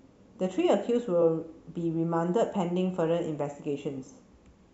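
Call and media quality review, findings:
Repeated frames, 1.21–1.23 s: brief stutter in the speech, one block of about 23 ms played a second time. Consistent with a single compressed frame of that length written or transmitted twice, probably in the encoder output or the packet path before decoding. Net effect: the clip runs 23.2 ms longer than the original audio.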